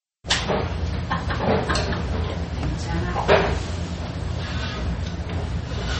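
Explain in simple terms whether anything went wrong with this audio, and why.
MP3 compression, likely, from start to finish: nothing above 8.3 kHz survives, so the treble sounds dull, and the damage is plainly audible as a watery, swirly texture. Short of data, the encoder chops off high frequencies and drops faint details that flicker on and off.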